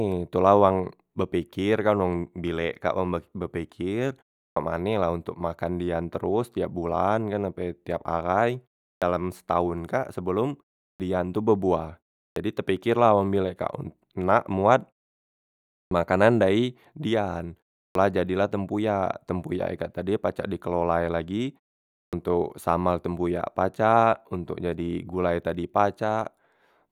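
At 4.5, 8.95, 10.93, 12.3, 15.85, 17.88 and 22.06 s, speech resumes with a clipped start after a pause of 0.34 to 1.01 s: the output path sleeps and wakes late, swallowing roughly 63 to 72 ms. Onsets appear as hard vertical edges out of blank silence.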